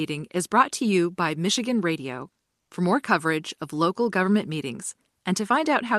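From 2.61 to 2.71 s, a brief pause in the speech holds comfort noise in place of the background: about 100 ms of steady, featureless hiss, roughly 6 dB quieter than the real room tone, most likely from Opus discontinuous transmission. Unlike a dropout, the gap is filled, not silent.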